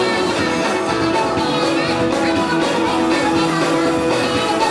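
From start to finish the sound runs fast and sits high, everything hurried along at 1.5 times its proper speed and lifted by about 7 semitones, a rise of roughly a fifth. Pitch and tempo shift together by the same ratio, the signature of a wrong sample rate: the samples are being played back faster than they were captured, with no conversion in between, which fits audio recorded at 16 kHz and played at 24 kHz.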